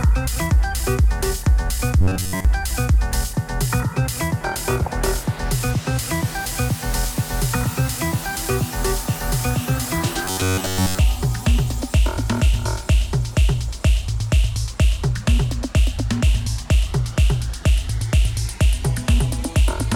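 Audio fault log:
2.01–2.45 s and 10.25–10.98 s: robotic sound from repeated short buffers. In both spans the sound becomes a rigid, metallic buzz pitched at 93.8 Hz. It still loosely tracks the underlying audio. The likely cause is fresh audio arriving too slowly, with the playback filling the gaps by looping a chunk of about 10.7 ms. Most of each span is repeated material, so the real audio there is largely skipped. The looping imposes the fixed buzz pitch.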